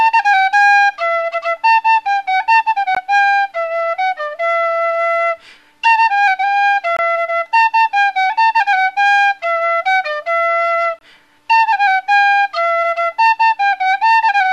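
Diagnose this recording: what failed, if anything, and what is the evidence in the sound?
The codec stage failed, leaving a gap at each join of encoded pieces. Short silences break continuous sound at 2.95 s (17 ms), 6.97–6.99 s and 10.99–11.01 s (23 ms each), spaced 4 s apart. Separately encoded segments were butted together untrimmed, so encoder start delay and final-frame padding remain.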